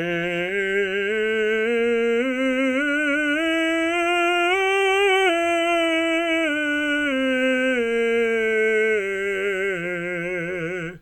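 No technical faults are audible.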